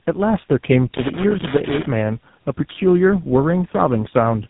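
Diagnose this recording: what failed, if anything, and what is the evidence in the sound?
The failure is at the codec stage: tandem speech coding. Across the whole clip the speech is rough, muffled and warbly. Nothing is present above about 3.8 kHz. The texture fits three speech coders in a row, likely CVSD, then AMR-NB, then GSM full rate, with G.711 links between them. Each border decodes the speech and codes it again. Every coder then models the errors left by the one before, so the damage compounds.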